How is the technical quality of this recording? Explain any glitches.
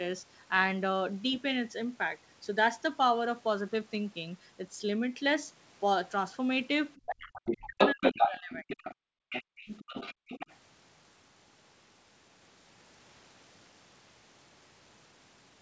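The recording has clear echo-control trouble between roughly 7 and 10.6 seconds, where a second voice intrudes and the main talker breaks up. The sound tops out around 8 kHz throughout, which points to a wideband call path such as G.722 at 64 kbps.

Other side's voice leaking through, at 6.96–7.13 s, 7.33–8.3 s, 8.52–8.95 s and 9.3–10.56 s: a second voice comes through alongside the talker, louder than the talker during the 7.33–8.3 s stretch and fainter elsewhere. This is likely residual loudspeaker echo the canceller failed to remove.

Speech suppressed in double talk, 7.1–8.65 s: the talker's voice dips and drops out in pieces for about a second, falling by about 40 dB at worst, likely because the canceller turned everything down while both sides spoke.

Background gated by the echo canceller, 8.95–9.57 s and 10.14–10.29 s: the room sound suddenly vanishes, by about 40 dB, then returns. 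The canceller clamped the microphone while the loudspeaker played.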